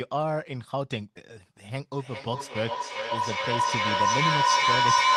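From 1.92 s to the end of the clip, a ringing tone around 1 kHz rises out of the speech and swells until it sits about 7 dB above it, throbbing roughly every 0.4 s. This is feedback howl: two devices in the same room share the call, so sound leaving one loudspeaker re-enters the other's microphone and comes back a little louder each trip. The loop's preferred frequency takes over, pulsing at its round-trip delay.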